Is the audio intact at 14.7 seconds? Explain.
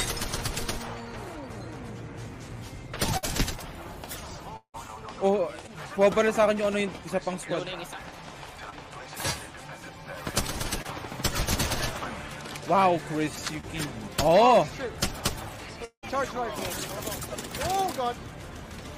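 Yes, the audio is intact at 14.7 seconds, with no dropout, click, distortion or other fault audible at that moment.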